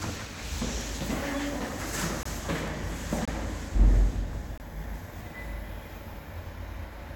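Corrupt frame muted at 2.23 s, 3.25 s and 4.58 s: damaged compressed frames were rejected by the decoder and replaced with silence, leaving abrupt dropouts of about 34 ms, 32 ms and 40 ms. The first gap fits two lost frames, the others one. Timing stays intact.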